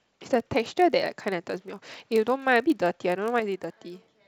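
Filter restarted on every block, throughout: a filter starts each block from silence, leaving a small transient every 20 ms, heard as a 50 Hz buzz that follows the speech's level.

Sudden gain jump at 3.40 s: speech and background noise drop together by about 6 dB and stay lower until the end, likely from a gain setting applied without a ramp.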